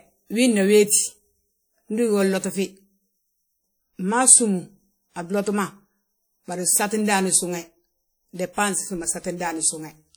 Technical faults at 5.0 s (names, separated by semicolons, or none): WMA compression